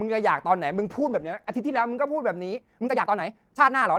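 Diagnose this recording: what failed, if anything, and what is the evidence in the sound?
A call bitrate drop, at the network and codec stage, starts at 0.7 s and lasts to about 1.93 s. The encoder's rate falls from 40 to 13 kbps and stays at the floor for about 1.17 s. The speech turns coarse and muffled because the codec, starved of bits, quantises roughly and discards the upper band. On a spectrogram the energy above a few kHz thins out or cuts off flat across that span, then returns when the rate recovers.

The last section, from 2.47 s to the end, plays about 1.87 times faster while the pitch is unchanged. It sounds hurried. This is a time-stretched section, likely from software squeezing audio to fit a length by dropping short overlapping chunks to keep pitch intact. The stage is call processing or playback. On the waveform, syllable envelopes sit packed closer together, with small seams where segments were spliced. 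Spectrogram harmonics keep their spacing while their durations shrink.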